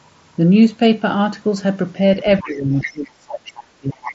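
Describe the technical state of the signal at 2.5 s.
At 2.5 s the talker's speech is being pulled down by speech suppressed in double talk. The dip runs from 2.41 s to the end of the clip at about 4.1 s. Both ends were likely talking at once. The echo canceller could not tell the talker's voice from the returning loudspeaker sound, so it turned everything down. The level drops by as much as about 30 dB. Roughly one and a half seconds of this stretch sound muffled or broken into pieces.

Inside that dip, from 2.47 s to 2.57 s, the other side's voice leaks through. It is a brief scrap of the far end's speech, likely loudspeaker sound that the echo canceller did not fully remove from the microphone. It sits about 25 dB below the talker's speech, so it is faint. It lasts about a tenth of a second. The band above 7.7 kHz stays empty here, as expected from the mSBC headset link.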